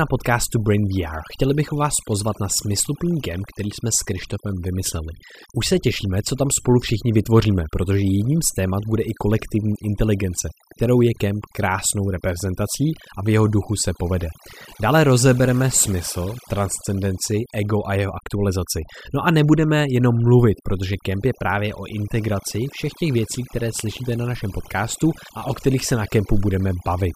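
Throughout, the speech sits over near-silent background with twinkling specks: overdone noise removal, where bands near the noise estimate were cut too hard.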